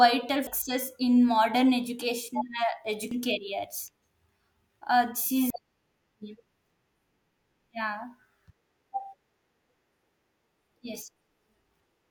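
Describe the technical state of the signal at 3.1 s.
At 3.11 s there's a short burst of damaged data in the compressed stream. A stretch of the encoded file got corrupted, so the decoder misreads those frames, loses sync and hunts for the next valid frame header, leaving a quick glitch in the speech.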